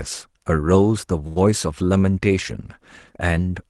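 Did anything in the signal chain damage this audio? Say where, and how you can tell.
Yes. There is a short stall from a late packet in the network and jitter-buffer stage of the call path, between 1.27 and 1.51 s. The sound there is held too long, with a faint buzz or dip, for about 88 ms. Nothing is lost. The audio resumes from the same point, just slightly late. A packet arrived after its slot and the buffer ran dry, so the receiver stretched the last sound to cover the gap.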